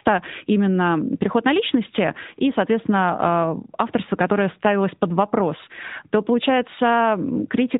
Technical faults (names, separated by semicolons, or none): AMR narrowband mobile codec